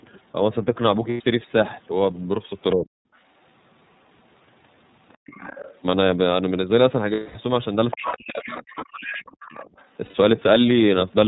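Throughout, the iLBC codec shapes the sound. Everything above 4 kHz is gone, and the speech carries the slightly rough, synthetic texture of a coder that rebuilds each 30 ms frame's excitation from scratch. The damage is plainly audible and fits iLBC's 13.33 kbps mode. The call's microphone processing trims only the deepest bass.

Lost iLBC frames appear first at 1.11 to 1.22 s, a 90 ms gap that fits three missing frames. The decoder fills it by repeating the last pitch cycle blended with noise, so the gap sounds like a held, faintly buzzy vowel. Because each frame decodes on its own, clean speech returns right after the gap.

Speech suppressed in double talk follows at 2.73 to 2.86 s, where the talker's level drops by about 20 dB for roughly 150 ms. This is likely the echo canceller, unable to tell the talker from loudspeaker echo while both sides spoke, turning everything down.

The other side's voice leaking through comes in from 5.14 to 5.75 s. 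A second voice sits about 20 dB under the talker, likely residual loudspeaker echo the canceller failed to remove.

Lost iLBC frames return at 7.13 to 7.36 s, a 210 ms gap that fits seven frames. The concealed buzzy tone fades over this longer stretch.

From 7.91 s the two problems overlap. Leakage at about 10 dB below the speech runs to 8.17 s. Heavy double-talk suppression then holds from 8.00 to 9.19 s, cutting the talker by up to about 35 dB over roughly a second. Further leaked fragments, about 15 dB down, come at 8.43 to 8.61 s, 8.77 to 8.86 s and 9.02 to 9.85 s. Inside that last stretch a brief suppression of about 20 dB hits 9.61 to 9.67 s.

A final set of lost iLBC frames at 10.05 to 10.14 s leaves another 90 ms buzzy fill.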